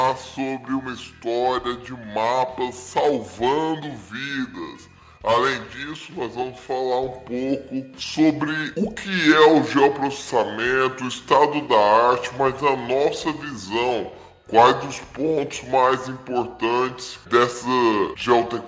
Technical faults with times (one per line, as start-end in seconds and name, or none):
0.00-18.68 wrong sample rate